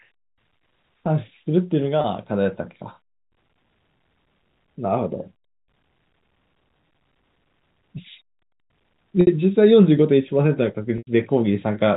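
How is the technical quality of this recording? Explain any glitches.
The recording has three brief dropouts, heard over a narrowband telephone-style path with nothing above 4 kHz.

Packet loss with pitch repetition occurs at 2.01 s, 9.21 s and 10.98 s, lasting 30, 60 and 90 ms. Each time, audio data went missing and the receiver bridged the hole by replaying the last pitch period, fading it out over about 50 ms. The 30 ms gap sounds like a slightly held, buzzy note. The 60 and 90 ms gaps fade toward silence, and the speech returns with a short cross-fade. These lengths point to one, two and three lost 30 ms packets.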